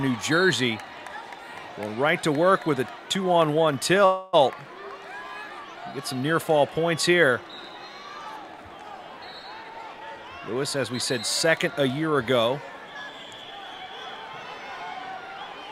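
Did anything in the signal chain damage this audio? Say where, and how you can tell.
Yes. A call audio freeze appears from 4.05 to 4.35 s. The sound stretches into a fading buzz for about 277 ms, then resumes exactly where it left off, with nothing lost. That points to the network stage: packets were likely held up in transit, the jitter buffer ran dry, and the receiver extended the last sound to fill the wait. Everything after it therefore plays 277 ms later than it should, until the speed-up at 9.57 s trims some of that back.

A jitter buffer speed-up runs from 9.57 to 10.90 s. The audio plays at 110% of its normal rate without any pitch shift, so it sounds hurried. This happens in the receive buffer. After the earlier stall, audio had piled up beyond the target delay, so the receiver trimmed many short pitch-period-sized slices in succession, removing somewhere around 150 ms to pull the latency back down.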